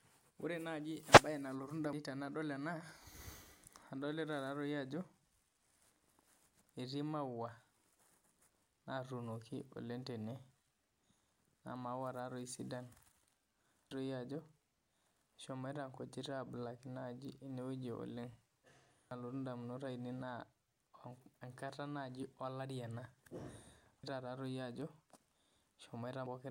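Damaged data in a compressed stream at 1.93, 13.91, 19.11 and 24.04 s, and from 26.26 to 26.36 s: corrupted frames make the decoder lose sync, leaving short chirps or blips.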